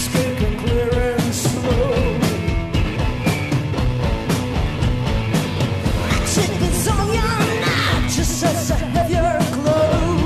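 At 9.01 s the compressed stream carries damaged data: part of the data in one stretch is corrupt, so the decoder misreads those frames, loses sync and hunts for the next valid frame header. The result is a brief glitch cutting across the sound.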